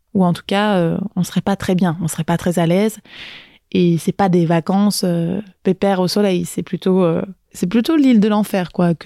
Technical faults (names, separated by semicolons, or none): gap between stream segments